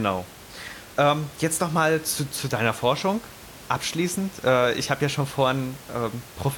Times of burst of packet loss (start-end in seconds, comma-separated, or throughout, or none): none